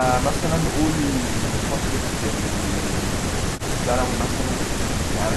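Nothing in this stretch of speech stands out as a technical problem; it just runs along without a hitch.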